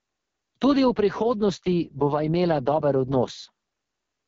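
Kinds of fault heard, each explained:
AMR wideband (HD Voice) codec: Across the whole speech clip the sound is rough and raspy, with heavy damage that fits the lowest AMR-WB mode, around 6.6 kbit/s. The codec rebuilds speech from a pulse-driven vocal tract model and fills only a thin noise band on top, so nothing is heard above about 7.3 kHz. That reach, wider than the 3.4 kHz ceiling of narrowband AMR, and the buzzy model-built texture distinguish it from plain low-pass filtering.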